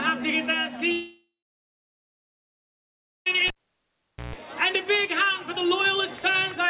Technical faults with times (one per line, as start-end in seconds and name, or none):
0.92-3.28 long network dropout
3.48-4.36 cable pulled and plugged in